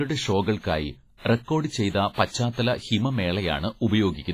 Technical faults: WMA compression

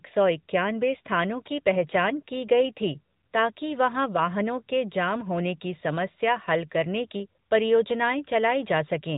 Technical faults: AMR narrowband mobile codec

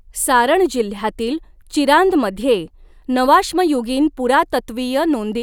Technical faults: none

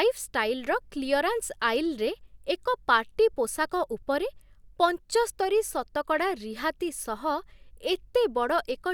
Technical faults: none

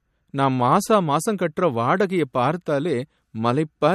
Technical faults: MP3 compression

